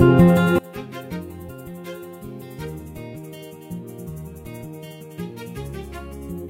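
From 0.59 s to the end, the sound collapses to a faint residue, about 24 dB down, as the likely result of one channel inverted in polarity cancelling against the other when summed to mono. The waveform shrinks sharply there, and the spectrogram dims across the whole frequency range.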